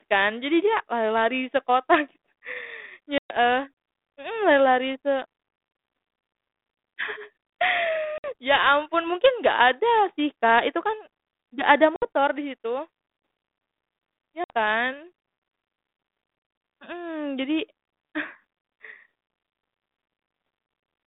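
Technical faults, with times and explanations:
3.18–3.37 s, 8.18–8.32 s, 11.96–12.07 s and 14.44–14.50 s: packet loss on an ADPCM call. Each drop cuts the speech to hard-edged silence, about 120 ms for the first and 60 ms for the others, which points to a few packets lost at a time. The band-limited 250 Hz to 3.7 kHz sound fits 32 kbit/s G.726. Because that decoder's adaptive predictor and step size lose track of the sender's during the gap, the speech resumes with brief, slight distortion, settling within some tens of milliseconds.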